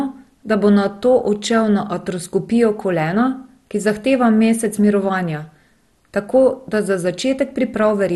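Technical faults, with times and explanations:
Throughout, MP2 compression: dull, gurgling speech with nothing above 12.2 kHz, likely coarse sub-band coding fitting about 64 kbps; the spectrogram shows flickering, patchy upper bands.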